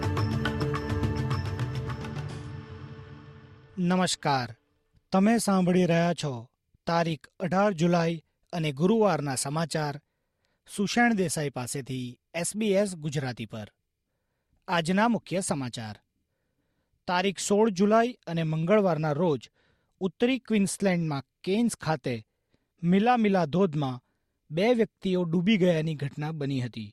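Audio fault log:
Nothing stood out on listening; the audio held steady throughout with no audible disturbance.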